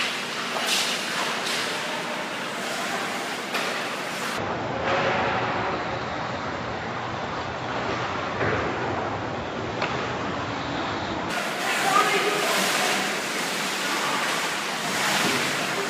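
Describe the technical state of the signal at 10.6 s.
Stereo read as mono runs from 4.38 to 11.30 s, covering 10.6 s. Alternating left and right samples are taken as one channel, so the sound plays at half speed and an octave low, with a faint mirrored copy in the upper spectrum.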